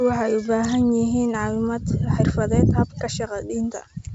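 Nothing stood out on listening to this speech clip, which comes through G.722 wideband telephone coding at 64 kbit/s with its usual ceiling near 7.7 kHz.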